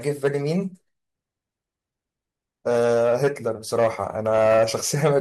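A speech recording with DAB burbling from 4.38 to 4.83 s, heard as a short stretch of burbling over the voice. Weak reception let bit errors, a bit error rate of around 0.2 percent, slip past error correction into the MP2 data, corrupting samples so individual sub-bands carry short blips of noise. A spectrogram would show scattered rectangular blocks flaring and vanishing in separate frequency bands across that half-second, while the waveform shows an irregular, lumpy envelope.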